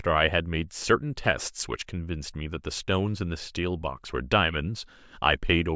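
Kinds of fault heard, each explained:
No kinds of fault are heard in this clip.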